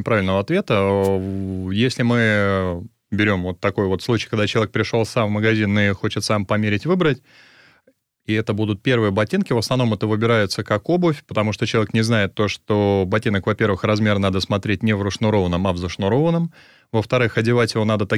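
At 1.02 to 1.09 s a wireless microphone noise hit occurs: the analogue FM radio link briefly fades, letting receiver noise through as a short swish of static.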